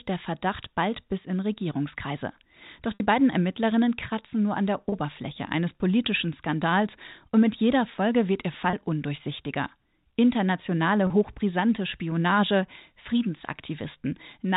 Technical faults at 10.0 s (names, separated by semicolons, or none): none